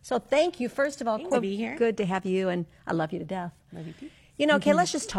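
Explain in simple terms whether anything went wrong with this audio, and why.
Something went wrong at 1.30 to 1.36 s: damaged data in a compressed stream. Corrupted bytes made the decoder lose its place, causing a brief glitch in the speech.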